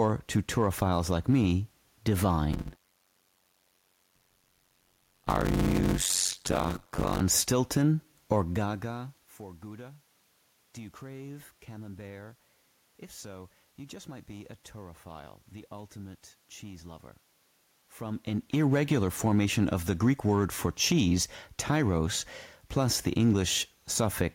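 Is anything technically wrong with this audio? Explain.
Yes. From 2.52 to 7.20 s the speech shows a block size mismatch (padded). One stage writes shorter blocks than the next stage reads, and the remainder of each block is zero-filled, which fits 256-sample blocks going into reads of about 480 samples. Each block therefore carries a short silent gap, heard as a buzz at 91.9 Hz, the block rate. The speech runs at 0.533 times normal speed but keeps about its normal pitch.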